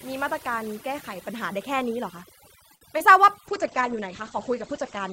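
Overdone noise removal runs through the whole speech clip: the suppressor pulls down any band near its noise estimate, so the background drops and breaks up into twinkling specks. Unlike a low bitrate, this is present from the start and doesn't change.

At 2.75 to 2.83 s there is a short stall from a late packet. The jitter buffer ran dry and the last sound was stretched for about 58 ms, then resumed from the same point. Nothing is lost, unlike concealed packet loss, but the sound is held too long, adding 58 ms of delay.

Two instances of short concealed packet loss follow at 2.93 to 2.96 s and 2.98 to 3.02 s. Each drops 20 ms of real audio, so unlike the stall, something is actually missing. The decoder bridges each hole by extending the preceding sound, leaving a quick smear or wobble.

From 3.48 s to the end, a call bitrate drop takes the encoder from 40 to 11 kbps, and the audio band narrows from 20 kHz to 8 kHz. 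The speech becomes muffled and rough and stays that way for the last 1.5 s. It differs from the noise-removal thinning because of the sudden loss of treble at a clear onset.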